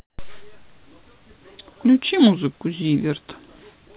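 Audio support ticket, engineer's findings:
Comfort noise in place of the background, 0.00–0.18 s: flat, featureless hiss about 15 dB off the real floor; spectrogram shows smooth uniform band below 4 kHz. Likely DTX pause filled by receiver.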